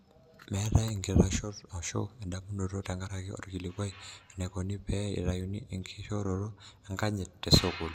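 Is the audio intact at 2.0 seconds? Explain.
Yes, at 2.0 seconds the speech is intact, with no dropout, click, distortion or other fault audible at that moment.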